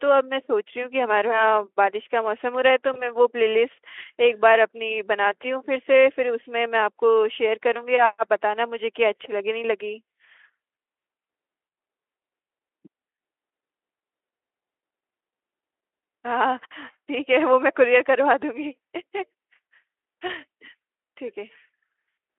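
At 2.93 to 3.17 s and 20.27 to 20.34 s, VoIP packet loss concealed by the speech codec replaces a missing 20 ms stretch with fading extrapolated sound, a buzzy tone or coloured noise, that lingers before recovering.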